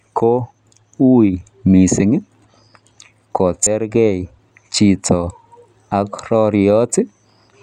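At 3.63 to 3.67 s, damaged data in the compressed stream makes the decoder misread frames and lose sync until it finds a valid header, giving a brief glitch. The spectrogram shows a narrow disruption, and the waveform an abrupt discontinuity.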